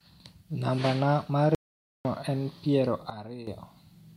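At 1.55 s the input path most likely lost its signal for half a second while recording carried on writing zeros. This is an audio dropout to silence: speech cuts off abruptly into dead digital silence with no room tone, then resumes at 2.05 s, and whatever was spoken in between is gone.

From 3.1 to 3.47 s a gain setting was likely applied instantly rather than ramped, giving a sudden gain jump. Speech and background noise drop together by about 11 dB in a single step, then return to their earlier level at 3.47 s.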